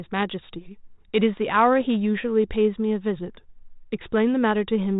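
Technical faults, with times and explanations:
Nothing in this speech clip stands out as a technical problem.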